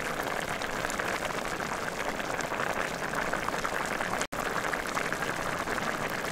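Everyday sounds, about 6 s long, marred by two faults. A repeated buffer occurs at 0.49 s and again at 4.81 s. Each is heard as a tiny click-buzz where one 1.33 ms block, which fits a 64-sample buffer, played four and then three extra times. On the waveform this shows as identical miniature cycles butted together with hard joins. On a spectrogram it is a thin vertical stripe with a 750 Hz comb. Between 4.26 and 4.33 s the sound drops out completely for 69 ms and then resumes, likely a Bluetooth stall where delayed packets let the headphone buffer run dry. It appears as a near-flat line on the waveform and a blank vertical band across all frequencies on the spectrogram.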